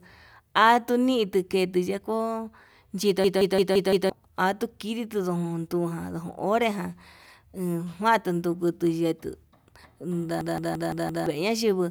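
Speech with two system hang loops, at 3.24–4.10 s and 10.41–11.26 s. Each time a 171 ms slice repeats five times at about 5.9 Hz, a machine-gun stutter that fits an 8192-sample buffer. On a spectrogram it shows as identical repeating blocks, and about a second of audio is lost.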